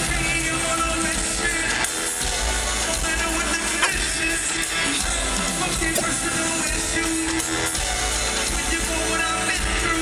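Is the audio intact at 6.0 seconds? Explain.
No. From 5.92 to 6.01 s there is damaged data in the compressed stream: corrupted bytes make the decoder misread those frames and lose sync until it finds the next valid frame header. For that roughly 0.1 s, the audio breaks into a short glitch, such as a chirp, squawk, click or brief hole.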